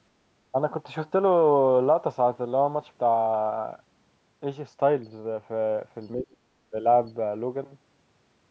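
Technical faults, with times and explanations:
6.13 to 6.43 s, speech suppressed in double talk: the speech dips sharply for about 0.3 s, falling by roughly 35 dB at its deepest. This is likely an echo canceller mistaking the near talker for loudspeaker echo while both sides spoke, and attenuating it.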